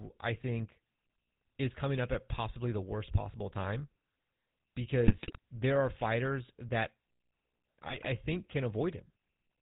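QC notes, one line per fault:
Throughout: GSM full-rate codec, plainly audible; the vocal-tract model with sparse pulse excitation and nothing above 4 kHz leaves the speech buzzy and gravelly, fitting a 13 kbps stream.
5.07–5.39 s and 7.83–8.07 s: GSM bit errors, the first ending just before "there are fighters that"; corrupted filter, pitch and gain values distort the spectrum and level, producing squawks and gargling.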